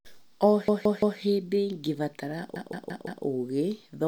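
A repeated buffer stutters the speech from 0.68 to 1.20 s and again from 2.56 to 3.24 s. New audio arrived late, so the device replayed its last block. A 0.17 s piece, which fits an 8192-sample buffer, repeats three extra times, then four, with hard joins. Nothing seems lost.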